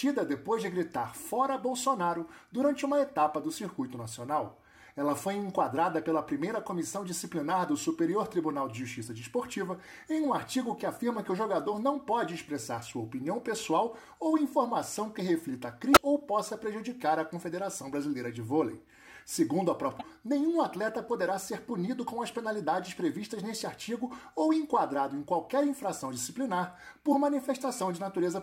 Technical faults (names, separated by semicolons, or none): damaged data in a compressed stream